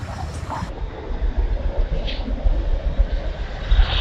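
From 0.69 s to the end, the audio drops to half speed and a full octave (12 semitones) lower. That's stereo read as mono: left and right samples get played back in sequence as one channel, stretching everything out, with a faint mirrored copy up top.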